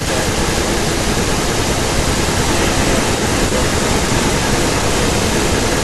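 Speech, with an echo leak running through the whole recording, from 0.0 s to the end. A second copy of the voice trails the original by about 0.3 s, heard as a doubled voice. The echo is roughly as loud as the speech itself, so it competes with it. The likely cause is a far end on loudspeaker whose echo canceller failed to remove what its microphone picked up. That leftover sound was sent back down the line.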